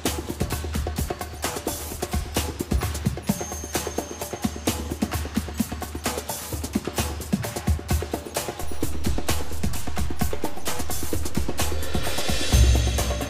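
At 8.63 s a DC step occurs. The waveform's zero line suddenly shifts by about -23 dBFS. That jump is heard as a low thump. The offset lasts until 12.50 s. The sound itself continues unchanged throughout.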